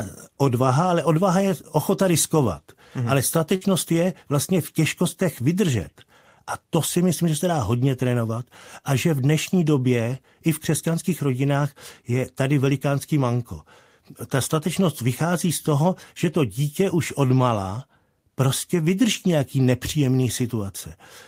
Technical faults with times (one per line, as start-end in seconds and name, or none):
3.55-3.63 burst of packet loss